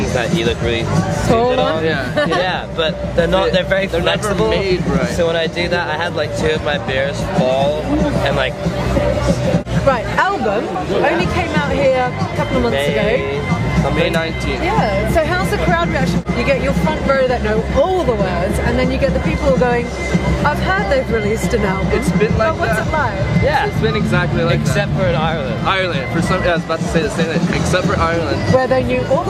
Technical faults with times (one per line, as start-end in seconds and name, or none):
10.74 block of digital silence